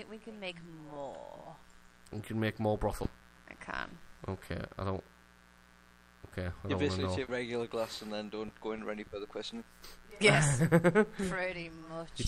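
Mains buzz runs through the whole clip. Sharp switching spikes from a dimmer, rectifier or unshielded line repeat twice per 60 Hz cycle, filling the spectrum with harmonics into the kilohertz range. The result is a steady, raspy buzz about 30 dB below the signal.

Skip ahead at 3.03 s: about 0.7 s of audio vanishes. Later material was already queued, so the dropped stretch was discarded rather than waited for, and playback jumps forward with no fill. The two sides of the cut are joined almost directly.

Jitter buffer speed-up from 3.14 to 4.37 s: the buffer held more audio than its target, so the receiver trimmed short pitch-period pieces over and over, about 150 ms in total. The sound plays at 111% speed with unchanged pitch, which comes across as hurried.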